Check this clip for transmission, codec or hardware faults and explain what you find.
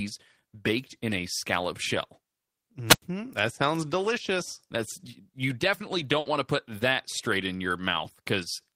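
Two separate faults occur in this speech recording, one from the radio link of a wireless microphone and one from a digital network path.

From 2.87 to 3.02 s there is a wireless microphone squelch dropout. The analogue FM signal weakened until the receiver's squelch shut the output, leaving a hole of near silence about 95 ms long. It differs from a network gap because hiss swells just before the mute, and the hole is genuinely empty rather than filled with a stretched copy of the preceding sound.

At 6.19 to 6.28 s, between "you definitely" and "want to put that", a burst of packet loss removes part of the audio. The receiver concealed the gap by extending the last received sound for about 60 ms while fading it, giving a brief held, smeared tone. The speech then resumes about 60 ms further on. Unlike the squelch dropout, there is no rising static and no clean silence, only an artificial sustain followed by a jump.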